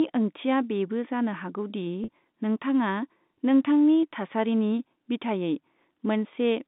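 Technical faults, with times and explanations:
2.04–2.08 s, packet loss with pitch repetition: About 40 ms of the speech drops out just before "नोंथाङा नोंथांनि थासारिनि बिथायै", which fits two 20 ms packets going missing. The receiver fills the hole by repeating the last pitch period it had. The gap is too short to fade away, so it comes across as a brief, slightly held buzz. The telephone band of roughly 150 Hz to 3.7 kHz carries through the patch unchanged.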